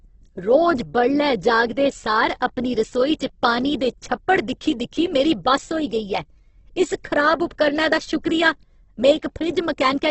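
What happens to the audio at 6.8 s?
At 6.8 s you're hearing the same thing that runs through the whole clip, which is likely Opus compression at a very low rate, something around 12 kbps in its music (CELT) mode. Nothing above about 8.2 kHz survives, so the speech sounds dull on top. When the encoder runs short of bits, it keeps each band's energy but fills the detail with folded copies or noise, which makes the speech sound rough and grainy.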